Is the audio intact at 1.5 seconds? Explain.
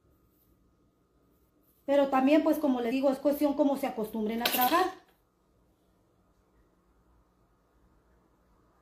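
No. At 1.49 s, compressed frames are skipped: about ten whole frames never reach the output, so the sound jumps ahead by roughly a fifth of a second, a span that fits 23.2 ms frames. The join is heard as a brief discontinuity where the audio jumps. On a waveform the envelope changes abruptly with no silent gap. On a spectrogram the patterns on either side splice together, with a brief broadband mark at the seam.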